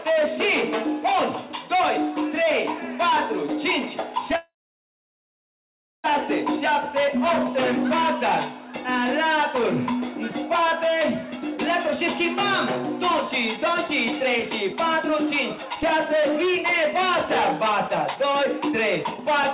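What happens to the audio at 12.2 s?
At 12.2 s the audio is finishing a jitter buffer speed-up that runs from 11.32 s to 12.24 s. The receiver's buffer had built up more audio than it wants to hold. To catch up, it cut out short pieces one or a few pitch periods long, over and over. Together they remove about 70 ms. The sound plays about 7 percent fast at unchanged pitch, so it sounds hurried. It stays band-limited to 4 kHz, as on the call path throughout.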